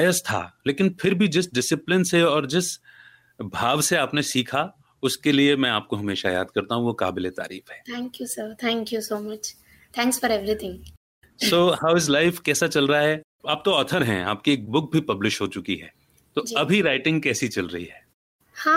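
Nothing is technically wrong with this speech recording, and no faults can be heard anywhere in it.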